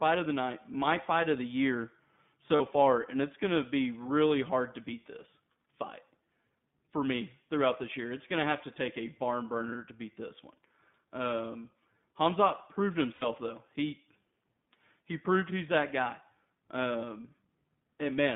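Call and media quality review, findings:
iLBC codec, whole clip: narrowband, rough, slightly synthetic speech. Line band runs about 150 Hz to 3.6 kHz with nothing on top. Framewise excitation coding is plainly audible, consistent with iLBC's 20 ms frames at 15.2 kbps.

Lost iLBC frames, 2.56 to 2.62 s: short held buzzy vowel where about 40 ms went missing, fits two 20 ms frames. The decoder repeats the last pitch cycle plus noise, and recovery is immediate.

Lost iLBC frames, 13.14 to 13.25 s: longer concealment, about 80 ms lost, fits four frames. The repeated pitch cycle fades out, then recovers cleanly.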